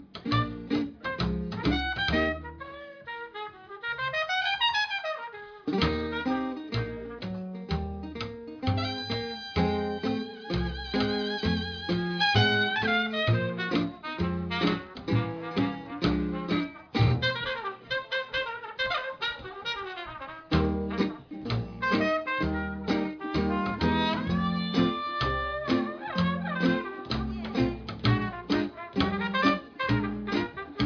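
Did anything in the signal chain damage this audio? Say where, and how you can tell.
No, none of the stages in the chain left an audible mark on this audio. Nothing heard here points to a problem in the wiring, conversion, processing, transmission or playback.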